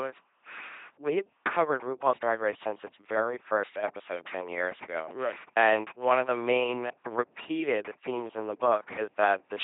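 From start to finish the speech runs through an LPC-10 vocoder, and it's heavily mangled. Each moment gets rebuilt by a small all-pole filter fed either a buzzy pulse train or plain noise, so the voice comes out buzzing, mechanical and robotic. Wherever the voiced/unvoiced call goes wrong, you get stray buzz or hiss. Nothing survives above 3.8 kHz, which fits a 2.4 kbit/s coder.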